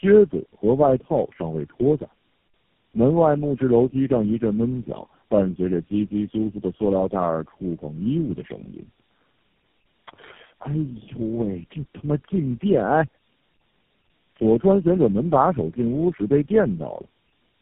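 Tandem speech coding runs through the whole clip. The speech sounds rough, muffled and warbly, with nothing above 3.4 kHz, consistent with passing through about four low-rate speech codecs in a row, each re-coding the previous one's already degraded output.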